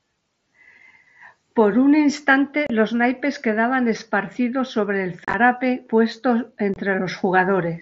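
At 2.67 s, 5.25 to 5.34 s and 6.74 s the speech drops out in short holes: unconcealed Bluetooth headset packet loss, where voice packets between headset and phone never arrived and silence took their place unrepaired. The holes last 30 ms, 52.5 ms scattered over 90 ms, and 22.5 ms, which fits 7.5 ms packets. They sound like abrupt cuts and chopping. A waveform shows flat gaps with sheer edges, and a spectrogram shows vertical blank stripes, within the mSBC link's 8 kHz band.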